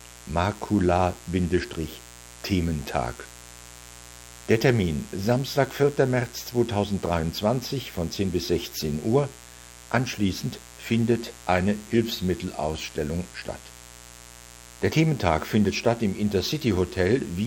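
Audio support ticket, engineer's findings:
Mains buzz under the speech, whole clip. Steady raspy 60 Hz buzz, harmonics well up into the kHz range, sitting roughly 20 dB below the talker. Points to a dimmer, rectifier or unshielded run injecting switching spikes twice per mains cycle.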